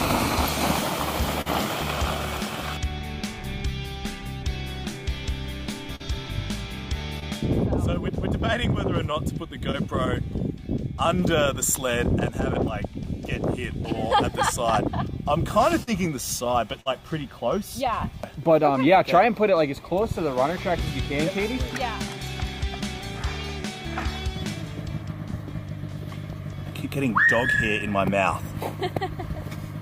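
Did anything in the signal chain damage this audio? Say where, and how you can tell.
Yes. The damage happened on the network path, and the receiving decoder's concealment covered it. Five short concealed packet losses are audible as brief smears or wobbles at 1.41–1.48 s, 5.96–6.02 s, 7.20–7.24 s, 9.72–9.75 s and 15.83–15.89 s. Each one replaces 20 to 40 ms of missing audio with a continuation of the preceding sound, which then cross-fades back into the real signal. A bad cable or a converter dropout would leave a hard click or real silence. Here the gap is filled with plausible sound, which points to packets lost in transit.

At 16.81–16.88 s there is a burst of packet loss. Consecutive packets failed to arrive in time, so the decoder extended the last sound and let it decay into a held buzz or fading hiss for about 46 ms. Playback then picks up further along, and about 40 ms of the original is simply gone. 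The earlier short losses blend back into continuous audio. This one sounds like a decaying hold followed by a small skip, which marks it as several packets lost in a row rather than a single isolated loss.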